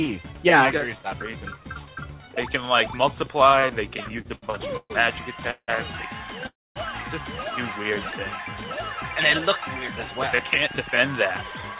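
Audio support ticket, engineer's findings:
Repeated stalls (stutter), 4.04–4.92 s: six short holds in under a second, the longest 130 ms, about 258 ms of filler in total, roughly 29% of that stretch. Jitter buffer kept running dry as packets arrived late or slower than playout, and the receiver extended the last sound each time. Differs from a freeze: many brief catches in a row, and nothing is lost.

Call audio freeze, 5.51–5.70 s: sound hangs for 173 ms, fading to about 70 ms of silence, then resumes where it stopped. Call audio freeze, 6.47–6.78 s: a 291 ms hang, with about 240 ms of it silent. Likely packets held up in transit, jitter buffer empty, last sound continued and decayed. Differs from the stutter: one isolated, longer hold that fades to silence, and playback is delayed by the full length of the hold.

Jitter buffer speed-up, 10.67–11.77 s: audio runs about 109% of normal speed at unchanged pitch and sounds hurried. 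The buffer was draining excess backlog by cutting pitch-period-sized slices repeatedly, about a tenth of a second in all. Differs from a resampling error: pitch does not rise, only the pace does. The band-limited sound, with nothing above 4 kHz, fits a 64 kbps G.711 mu-law call path.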